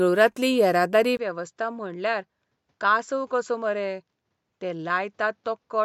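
From 1.17 s to the end, the speech turns duller, with nothing above 7.5 kHz, drops about 5 dB in level and gains a new noise floor around 50 dB below it, after a 20 ms gap. The likely cause is an input switched to a poorer device.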